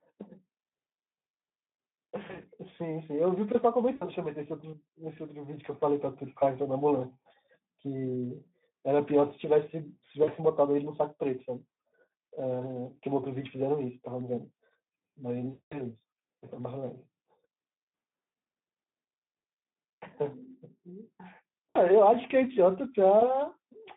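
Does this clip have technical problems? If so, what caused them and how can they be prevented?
Yes, two things stand out. First, the whole clip carries Speex codec damage. It sounds like narrowband Speex at about 11 kbps: the line only reaches from roughly 150 Hz up to 3.6 kHz, so it's muffled, and the speech comes out hoarse and grainy because the encoder has too few bits to model the excitation properly. The fix is to run Speex in wideband mode at a higher quality setting, or switch to a modern codec like Opus.

Second, there's VoIP packet loss concealed by the speech codec at six spots: 2.27 to 2.47 s, 3.95 to 4.04 s, 10.23 to 10.29 s, 15.49 to 15.80 s, 21.70 to 21.82 s and 23.19 to 23.38 s. Each time, the decoder stretches its last pitch and filter into a fading fill, and the sound stays weak for a moment after audio returns. The first spot is a scatter of short dropouts, about 80 ms lost over 160 ms. 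The worst is 15.49 s, with roughly 220 ms missing. Better network QoS, a jitter buffer, and forward error correction would keep those gaps from happening or cover them.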